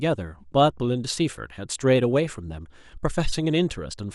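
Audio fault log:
throughout: MP2 compression. The audio was most likely carried through MPEG Layer II coding at a low rate, and the sound fits one around 80 kbps. With so few bits to share among the 32 sub-bands, the upper bands are shut off and the remaining ones are quantised coarsely. The speech sounds dull and lacks top end. A granular, gurgling roughness sits on it, and high-frequency detail flickers in and out as the bands switch on and off.
2.26 to 2.36 s: DAB burbling. A short burst of bit errors got past the error correction and into the MP2 data. The error rate was a small fraction of a percent, enough to spoil 7 audio frames. Corrupted samples put short blips of noise into individual sub-bands. For about 0.1 s the speech is broken by burbling blips of noise.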